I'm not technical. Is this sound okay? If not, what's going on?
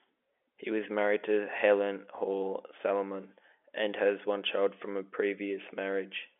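Yes, no faults found.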